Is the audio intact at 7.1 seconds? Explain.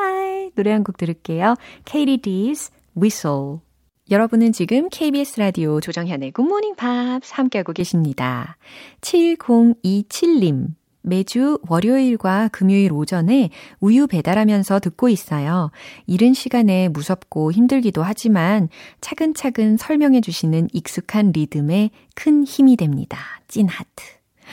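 No. From 5.87 to 7.80 s the speech turns duller and a little quieter, with nothing above 7.6 kHz and faint new background noise, likely an input switched to a poorer device. The simultaneous shift in level and noise, not just lost treble, separates it from a simple filter.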